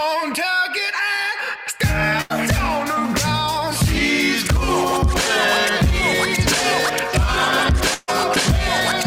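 Burst of packet loss at 2.21 s and again at 7.94 s: the receiver held the music for about 84 ms, then 138 ms, fading it, before skipping ahead past the missing audio.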